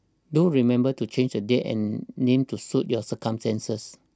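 No technical faults are audible.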